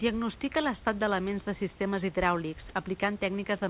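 It's a short speech clip that came over a narrowband call path, with nothing above 4 kHz, which fits G.711 mu-law at 64 kbps. There's faint room noise sitting about 29 dB under the speech. At 2.69 s there's a tiny gap of about 10 ms where the speech gives way to flat comfort noise and then snaps back. That's most likely sound dropped by the voice detector: it briefly judged that sliver as background, stopped sending, and the far end filled the hole with generated noise.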